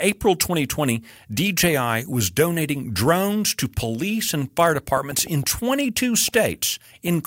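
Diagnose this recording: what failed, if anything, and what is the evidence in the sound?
Something in the capture chain began injecting short pulses partway through. This is likely electrical interference in the analogue wiring or a faulty connection or power supply. Right after "to police and fire", from 4.75 s to 7.09 s, a train of clicks rides over the speech: around seven similar pops at roughly three per second, unevenly spaced, peaking about 5 dB above the speech itself. They sound like ticking laid on top and persist through pauses.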